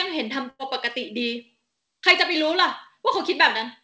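At 0.50 to 0.61 s, a burst of packet loss: about 100 ms of speech is lost, and the last sound is stretched and fades out. Unlike a clean dropout, there's no silence, and speech resumes further along.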